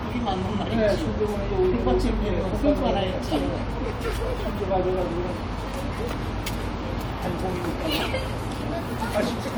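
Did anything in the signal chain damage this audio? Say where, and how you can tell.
No, nothing in the signal chain damaged this audio.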